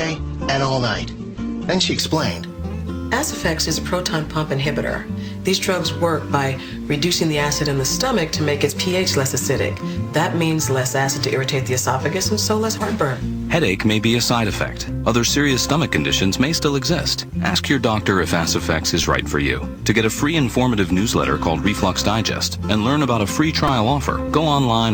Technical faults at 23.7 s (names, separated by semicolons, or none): repeated buffer